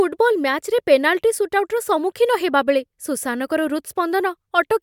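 No technical faults can be heard anywhere in it.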